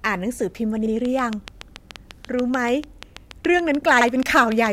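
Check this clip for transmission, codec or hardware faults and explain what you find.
Two faults turn up: a repeating stutter from overlapping chunks and a steady train of clicks over most of the speech.

At 0.86 s, 1.91 s and 4.01 s there is a brief stutter or click where a 50 ms slice of speech plays twice. These are overlapping chunks. The audio was handled in blocks of about a second, and each block began 50 ms before the previous one finished, so that stretch is duplicated at every join.

From 1.05 s to the end, a regular ticking runs at about 6.9 clicks per second, heard through the speech and in the pauses. Each click peaks about 10 dB above the speech. This train of clicks is likely caused by interference from nearby equipment or by a faulty connection or power supply injecting the same pulse over and over.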